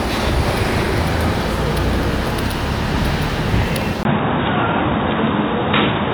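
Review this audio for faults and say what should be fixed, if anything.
At 4.03 s there's a 20 ms gap, then the sound goes dull to the end, with nothing above 3.8 kHz, a level shift of around 5 dB and a faint new noise floor. That's likely an input switched to a poorer device partway through. Lock the recording input to one device so the system can't hop to another microphone or a headset's call profile mid-take.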